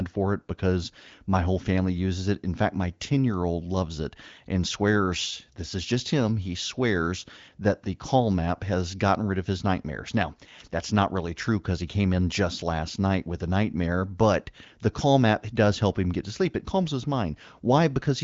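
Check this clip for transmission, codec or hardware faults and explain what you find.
I find no transmission, codec or hardware faults in this clip.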